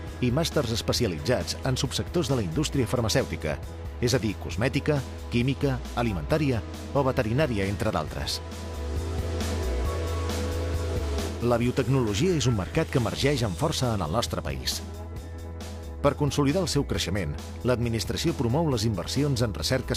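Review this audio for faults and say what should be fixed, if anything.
Nothing stood out on listening, so there is nothing here that needs fixing.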